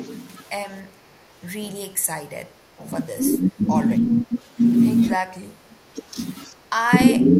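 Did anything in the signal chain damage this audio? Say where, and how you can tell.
Yes, the call processing stage damaged it. The speech dips in level in six places: 3.14 to 3.82 s (about 15 dB), 4.03 to 4.34 s (about 10 dB), 5.11 to 5.18 s, 5.35 to 5.8 s (the deepest, about 30 dB), 6.53 to 6.57 s, and 7.17 s to the end. These are likely speech suppressed in double talk. The echo canceller heard both sides at once, could not tell the talker from loudspeaker echo, and turned everything down.

At 4.37 to 4.41 s, just after that second dip, a faint delayed copy of the speech comes through, about 35 dB below the main signal and trailing it by 291 ms. This is likely an echo leak. One side was playing the call over a loudspeaker, and its echo canceller did not fully remove what its microphone picked up, so a brief scrap of the returned signal slipped back into the call.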